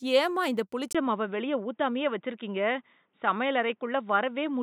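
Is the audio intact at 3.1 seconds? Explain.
No. From 0.93 s, just after "ஏம்மா இந்த", to the end, the sound is dull and boxy, with nothing above 3.8 kHz, a 20 ms gap at the switch, and faint new background noise. This is likely an input switched to a poorer device. A spectrogram shows a flat ceiling, and the waveform shows a brief dropout at the switch.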